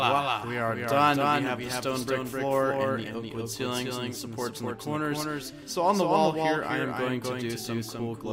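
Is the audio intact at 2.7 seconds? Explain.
No. At 2.7 s a doubled audio track, present throughout, adds a second full-band copy about a third of a second late and about 5 dB quieter, likely from a slower second capture path. Unlike an echo, it has no decay or room colour.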